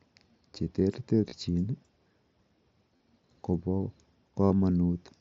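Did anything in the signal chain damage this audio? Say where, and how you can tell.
Yes. The Bluetooth headset link dropped packets, which shows as concealed Bluetooth headset packet loss. Brief buzzy, held fills occur at 1.29 to 1.33 s, 2.97 to 3.00 s and 4.46 to 4.51 s. The receiver patched each gap by repeating the best-matching recent waveform. The last fill, covering 52.5 ms, is the longest of the three.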